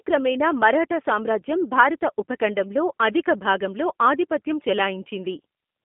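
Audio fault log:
Throughout: G.729 codec damage, plainly audible. The speech sits in a narrow phone band of about 200 Hz to 3.5 kHz, with nothing above 3.6 kHz. It sounds rough and slightly synthetic. The codec rebuilds each 10 ms frame from a vocal tract model, pitch prediction and a few pulses, which fits an 8 kbit/s stream.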